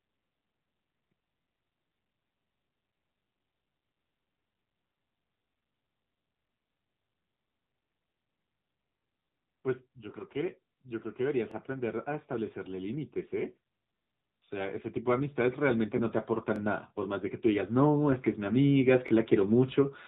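Right through the clip the speech carries the sound of the AMR narrowband mobile codec: nothing above 4 kHz, a buzzy, synthetic edge that fits a low mode around 8 kbps.

Starting at 1.42 s, then 3.95, 6.47, 8.99, 11.51, 14.04, 16.56 and 19.08 s, there's a small stutter. That's overlapping chunks: every 2.5 s a join replays about 23 ms of audio.

From 9.9 to 13.6 s, automatic gain rising swells everything by about 6 dB, then again from 14.3 s to the end by about 10 dB, as the gain control decides the input is too quiet.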